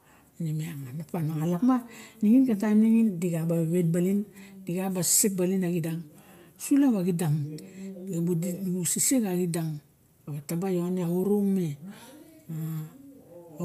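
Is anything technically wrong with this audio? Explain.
No, nothing technically wrong can be heard here.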